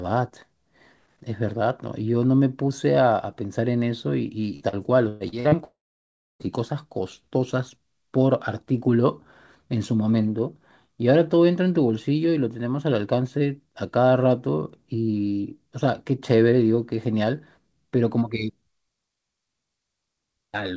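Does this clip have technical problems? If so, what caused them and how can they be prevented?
Yes. From 4.56 to 5.55 s there is repeated packet loss (robotic sound): the speech turns choppy as six separate holes open in under a second. Each hole is covered by stretching the last received sound, so about 320 ms of that span, roughly a third, is synthetic fill, with the longest single gap at 117 ms. Losses this closely spaced give the concealment no clean audio to recover between them. Prevention: use forward error correction or redundant packets and a better network link so isolated losses don't pile up.

Right after, from 5.64 to 6.43 s, the audio cuts out almost completely. A brief continuation of the last sound fades, and then about 650 ms of silence follows before speech resumes, with around 760 ms of content never heard. This is likely a long network dropout, where nothing reached the receiver for most of a second and the concealment gave up and muted. 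Prevention: stabilise the connection, for example by moving from congested Wi-Fi to a wired link.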